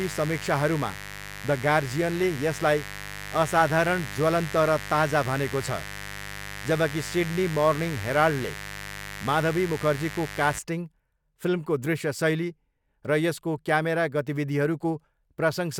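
From the start to 10.59 s, a raspy mains buzz sits under the speech. Sharp switching spikes on the 50 Hz supply leaked in, spraying harmonics well above the fundamental.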